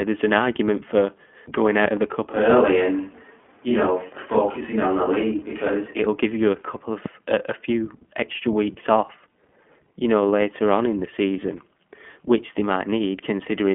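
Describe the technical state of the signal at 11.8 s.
At 11.8 s the speech carries iLBC codec damage, present across the whole clip. Each independently coded 20 ms frame sounds rough and synthetic, with nothing above 3.7 kHz.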